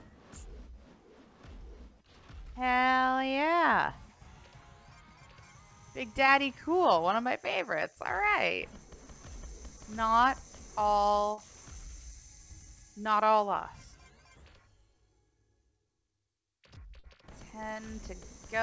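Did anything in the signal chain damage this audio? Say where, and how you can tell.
Yes, short concealed packet loss on the network. Brief smears occur at 6.26–6.30 s, 11.34–11.39 s, 16.99–17.05 s and 17.73–17.77 s. Each hole lost 20 or 40 ms of audio. The receiver stretched the preceding sound across it, then blended back.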